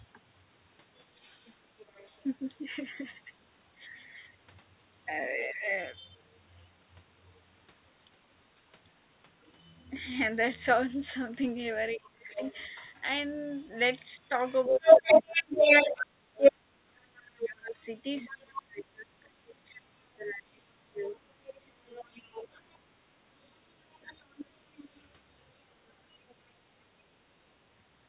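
From 1.46 to 2.25 s, a faint second voice sits well below the talker. This is the other side's voice leaking through, likely loudspeaker echo the canceller did not fully remove. A louder scrap of it, still under the talker, cuts in from 5.42 to 5.47 s.

From 5.53 to 5.67 s the talker's speech is suppressed in double talk, dipping by about 10 dB for roughly 150 ms. This is likely because the canceller could not separate the talker from the echo and turned both down.

From 9.42 to 26.34 s the leaked far-end voice returns and runs louder than the talker.

Between 11.96 and 24.14 s the talker's speech is suppressed again in pieces, totalling around 5 s and dropping as much as about 25 dB while the echo plays over it.

The whole recording is band-limited, with nothing above 4 kHz, which fits the G.711 mu-law call path at 64 kbps.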